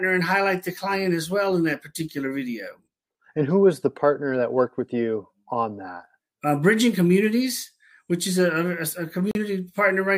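A Bluetooth stall occurs at 9.31 s, where the sound drops to silence for about 38 ms and resumes by 9.36 s. The cause is likely radio interference that delayed packets on the wireless link, so the headphones' buffer ran empty before the retransmitted data arrived. Playback simply halted and then continued, heard as a brief gap of silence, near the very end of the audio.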